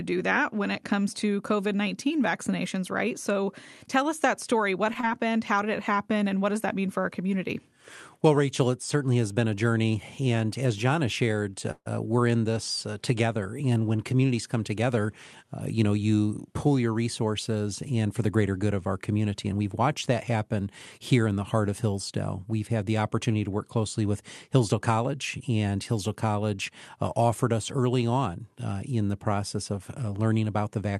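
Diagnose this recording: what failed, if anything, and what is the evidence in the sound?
Short concealed packet loss at the network stage: about 20 ms of packets were lost at 5.01 to 5.05 s, and the decoder extended the preceding sound into a brief smear.

Call audio freeze in the jitter buffer, likely from delayed packets: at 11.71 to 11.88 s the sound stretches, falls silent for 50 ms, then resumes with nothing missing.

Jitter buffer speed-up: an overfull buffer was drained by cutting out pitch periods, so 14.73 to 15.98 s runs 7% fast and 18.94 to 19.53 s runs 8% fast, with pitch unchanged.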